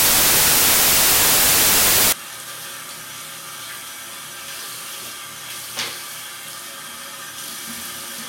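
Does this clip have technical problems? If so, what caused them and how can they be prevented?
Yes. From 0.00 to 2.12 s the audio turns into loud, harsh broadband noise. These are samples built from the wrong bytes. The reader assembled each sample incorrectly. It was shifted by a byte, read the bytes in reverse order, or assumed the wrong alignment. The rapidly changing low bits then became the dominant part of each value. To prevent it, match the reader's byte order, sample width and alignment to the file's actual format.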